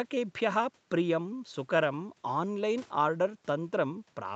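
Nothing in this speech recording stood out as a problem on listening.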